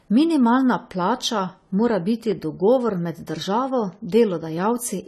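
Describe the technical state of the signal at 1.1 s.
At 1.1 s the speech carries AAC compression, present across the whole clip rather than only at this moment. Nothing sounds above about 13.9 kHz, and the coding damage is plainly audible. The likely cause is AAC-LC encoding at a low rate, around 32 kbps: the encoder quantises each frame's frequency lines against a hearing model and discards the top band. A plain low-pass filter would only dull the sound. Here the audible coding damage sets it apart.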